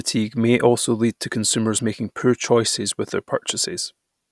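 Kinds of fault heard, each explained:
No technical fault can be heard anywhere in this speech recording. Careful listening turns up nothing that calls for an entry.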